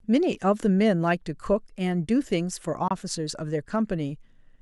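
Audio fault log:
1.04 s, dropped samples: A single sharp click cuts through the speech, most likely because a fraction of a millisecond of samples went missing from the stream. The waveform jumps straight from one value to a later one instead of moving smoothly, and that step is what the ear hears as a tick. Too little is lost to remove any sound. On a spectrogram it appears as a thin vertical line spanning the frequency range, and on the waveform as a small discontinuity.
2.88–2.91 s, Bluetooth dropout: The audio goes silent for 23.2 ms and then resumes further along, as though it had kept playing during the gap. The likely cause is audio data failing to reach the headphones in time and being discarded, and a hole of this length fits a single lost packet. On the waveform it is a flat stretch with abrupt or very briefly faded edges. On the spectrogram it shows as a narrow blank vertical band.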